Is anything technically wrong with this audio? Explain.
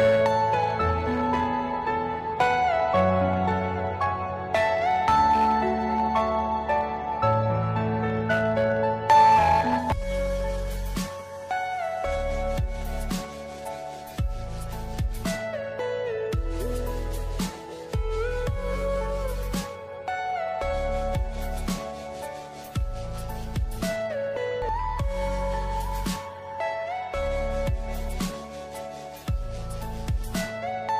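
Yes. From 10.02 to 11.21 s there is GSM signalling burst interference: a galloping dit-dit-dit run of short buzzes at a 216.7 Hz repetition rate, sitting roughly 20 dB below the main signal. A nearby 2G phone exchanging brief control transmissions with the network emits pulsed radio bursts, and a circuit in the audio path rectifies that RF envelope into audible clicks and buzz. The grouped pattern fits signalling traffic rather than an active call.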